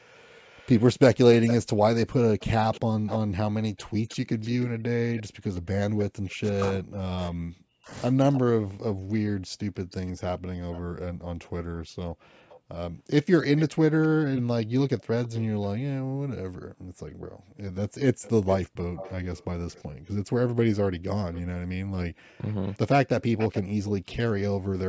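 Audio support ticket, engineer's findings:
Echo leak, 0.45–6.04 s, 8.31–10.8 s, 12.49–15.68 s, 18.22–23.91 s. A delayed copy of the speech trails the talker by 307 ms in the first stretch and 356 ms afterwards, at about 15 to 20 dB below the speech. The likely cause is far-end loudspeaker pickup that the echo canceller failed to fully cancel before it was sent back.

Speech suppressed in double talk, 6.09–7.92 s. The talker's speech dips and breaks up in pieces for roughly a second and a half in total, sometimes falling to near silence. The likely cause is the echo canceller mistaking overlapping talk for echo and attenuating both.

Background gated by the echo canceller, 12.1–12.23 s and 16.57–16.99 s. The room tone drops by about 40 dB, briefly and then for a little under half a second, and recovers once the canceller releases the microphone suppression it applied during loudspeaker playback. 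Call microphone processing band-limits the audio at 8 kHz.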